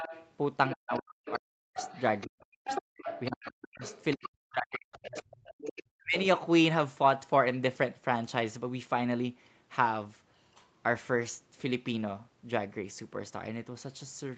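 A speech clip in which a second, fainter voice, roughly 10 dB below the talker, bleeds through at 0.0–0.31, 0.71–1.38, 1.78–4.28 and 4.93–5.81 s, likely the other side's voice leaking through from loudspeaker echo that the canceller left in. The main voice also sinks, by as much as roughly 40 dB, at 0.74–1.79, 2.26–3.83, 4.15–5.46 and 5.79–6.17 s, likely speech suppressed in double talk as the canceller turned down both voices while they overlapped. Within the call's normal microphone processing, the band stops at 8 kHz.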